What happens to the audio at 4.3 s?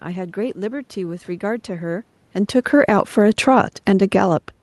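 At 4.3 s you're in the middle of an automatic gain rise, from 2.96 to 4.56 s: the gain control creeps up about 3 dB, so voice and background swell together.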